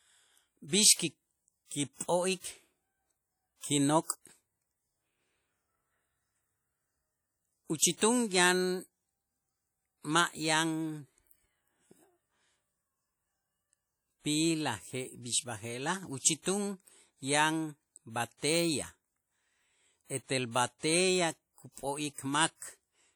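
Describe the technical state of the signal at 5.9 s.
At 5.9 s the speech carries plainly audible WMA compression damage, and it runs through the whole clip rather than starting or stopping there. It sounds ringing and washy, with a hiss that swells and fades with the voice, likely from a long-block transform codec such as WMA 1 at a low rate, roughly 48 kbps. Its quantisation noise smears across tens of milliseconds. A spectrogram would show blurred onsets, patchy gaps where weak components were zeroed, and nothing above 20.1 kHz.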